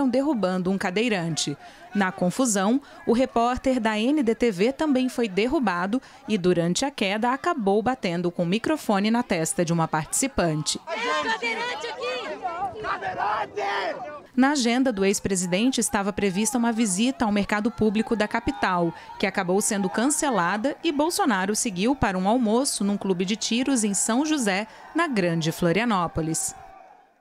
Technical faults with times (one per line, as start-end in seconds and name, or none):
1.32-1.86 drift correction step
11.43-12.28 drift correction step